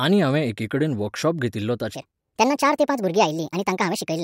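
From 1.95 s, just after "हांवें एकिकडेन वर्कशॉप घेतिल्लो", the speech turns high and hurried to the end. It is a wrong sample rate: audio recorded at 32 kHz plays at 48 kHz, 1.5 times too fast and about 7 semitones up.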